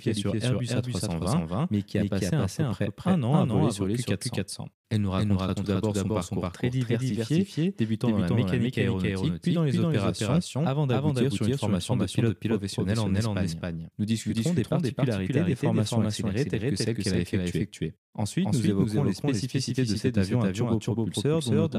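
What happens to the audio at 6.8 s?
At 6.8 s the speech carries a doubled audio track, present across the whole clip rather than at that moment alone. A second full-band copy trails the original by roughly 300 ms at about the same level, so every syllable is followed by a clean repeat with no decay or room colour. The cause is likely a second capture of the same signal through a slower path, mixed back in out of step.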